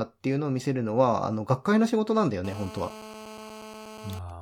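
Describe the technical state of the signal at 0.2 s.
At 0.2 s the speech signal is intact, with no audible fault at that point.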